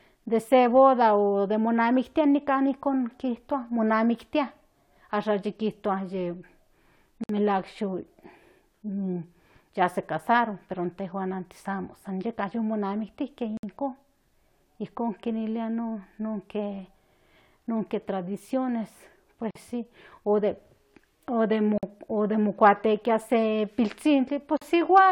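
Gaps at joins of encoded pieces fall at 7.24, 13.57, 19.51 (just before "si o"), 21.78 and 24.57 s, lasting 41 to 59 ms. The speech was encoded in separate pieces and joined untrimmed, so encoder start delay and last-frame padding leave abrupt, smeared silences before the speech resumes.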